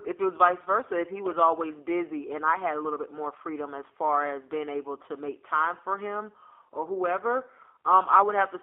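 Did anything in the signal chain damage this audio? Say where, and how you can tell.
Yes. The damage is at the codec stage and runs through the whole clip: the speech has the rough, slightly synthetic grain of G.729 coding, and the band is held to about 300 Hz to 3.4 kHz. A plain telephone band filter would leave the voice narrow but clean. Here the codec rebuilds each frame from a vocal tract filter, a pitch predictor and a few pulses. That buzzy texture fits an 8 kbit/s G.729A link.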